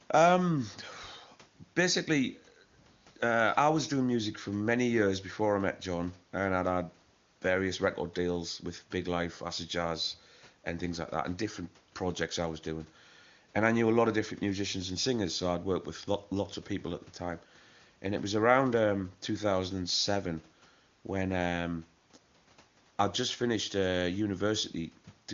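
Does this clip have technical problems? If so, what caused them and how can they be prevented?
No, nothing in this speech needs fixing: the room noise sits about 35 dB below the voice, and the band stopping near 7.4 kHz is simply the AMR wideband (HD Voice) codec's normal limit, with its faint coding sound fitting one of its higher bitrates.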